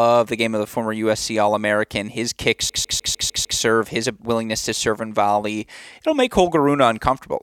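Speech, with the disc stuck on one turn: from 2.69 to 3.60 s the laser keeps jumping back, replaying the same 151 ms of audio six times in a fast, even stutter with a brief mute at each jump.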